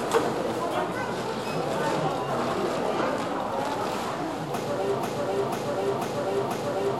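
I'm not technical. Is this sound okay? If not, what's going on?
No. There is a broken-record loop from 5.03 s to the end of the clip. A short piece of sound, about half a second long (0.49 s), plays four times in a row, exactly the same each time, and never moves on. The likely cause is that the player or stream stalled and kept repeating the last bit it held. The sound that should have played during those final seconds is missing.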